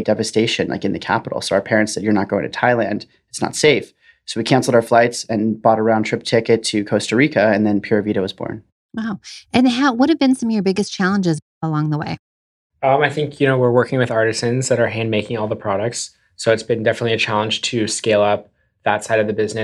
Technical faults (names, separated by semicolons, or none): none